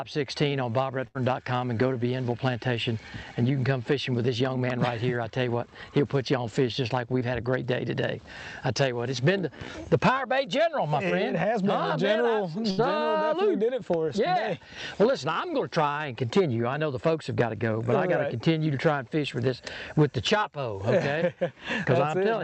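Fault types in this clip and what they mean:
Burst of packet loss: At 1.07 to 1.17 s and again at 12.7 to 12.8 s, a run of audio about 80 ms long fails to arrive in time. The receiver extends the last sound it had for roughly 70 ms, fading it down, so each gap is heard as a brief held, decaying tail. Playback then resumes further along, with that stretch of the original missing.
Short concealed packet loss: Around 7.19 to 7.23 s, about 20 ms of audio never reaches the decoder in time. The receiver covers the hole with roughly 19 ms of synthesised continuation, built from the preceding sound, then blends back into the real signal. The result is a momentary smear or wobble rather than an audible gap.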